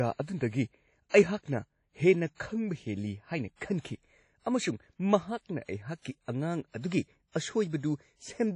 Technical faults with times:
0.00-8.56 WMA compression

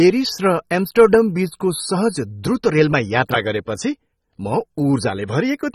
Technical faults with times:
0.00-5.75 AAC compression

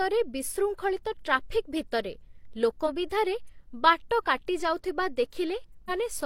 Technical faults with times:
2.84-2.90 damaged data in a compressed stream
5.85-5.91 damaged data in a compressed stream

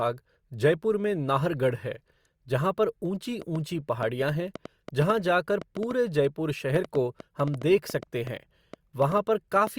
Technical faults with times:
3.42-9.68 train of clicks

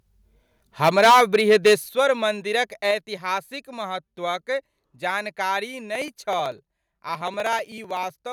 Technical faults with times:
0.83-1.74 microphone overload
0.89 microphone volume stepped down
1.89 microphone volume stepped down
2.91 microphone volume stepped down
5.95-8.22 periodic USB or driver dropouts

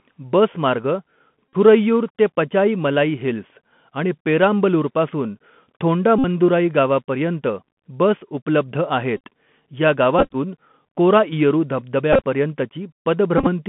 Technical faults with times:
0.00-13.68 Bluetooth CVSD headset codec
1.53-1.56 Bluetooth headset packet repeated
6.18-6.24 Bluetooth headset packet repeated
9.17-9.20 Bluetooth headset packet repeated
10.19-10.36 Bluetooth headset packet repeated
12.13-12.23 Bluetooth headset packet repeated
13.38-13.48 Bluetooth headset packet repeated

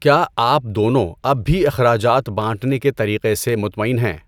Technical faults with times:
0.27-3.49 clock drift buffer slips

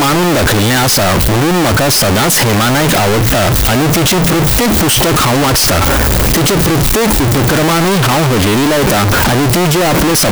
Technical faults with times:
0.00-10.32 float read as integer

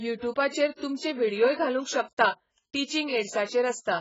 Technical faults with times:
0.00-4.00 AAC compression
0.13-3.99 clock slip clicks

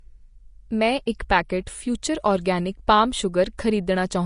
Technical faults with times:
0.00-4.26 Vorbis compression

